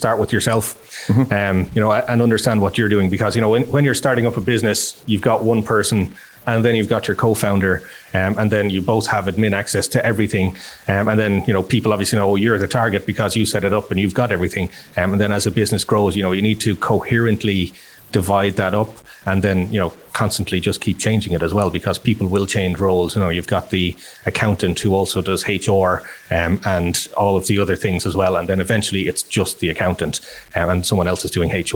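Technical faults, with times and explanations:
throughout: low bit depth without dither. The speech was likely truncated to 7 bits without dither, so signal-following error, roughly 30 dB down, makes quiet passages grainy.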